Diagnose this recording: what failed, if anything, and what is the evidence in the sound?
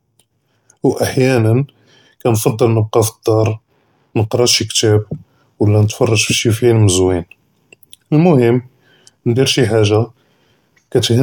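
Nothing in this speech recording points to a failure at any stage, so there's really nothing to diagnose here.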